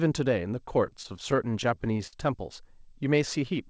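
From 0.90 to 2.15 s the speech shows repeated stalls (stutter): a dozen brief holds, the longest about 55 ms, where the jitter buffer ran dry and the receiver stretched the last sound until packets caught up. Nothing is lost, but the delivery drags unevenly, with the band-limited call audio ending near 8 kHz.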